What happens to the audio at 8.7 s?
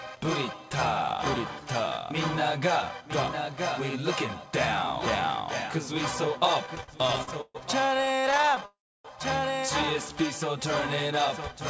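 A call audio freeze runs from 8.65 to 9.06 s. The stream halts, most likely because packets were held up in transit and the jitter buffer ran dry. The last sound is stretched into a brief fading buzz, then about 290 ms of silence, before playback resumes where it stopped, about 390 ms late.

Repeated stalls (stutter) lead straight into it, from 7.95 to 8.63 s. Packets arrived late again and again, so the buffer kept emptying and the receiver bridged each gap, none longer than about 23 ms, by continuing the last sound. The result is a dragging, choppy flutter across that stretch.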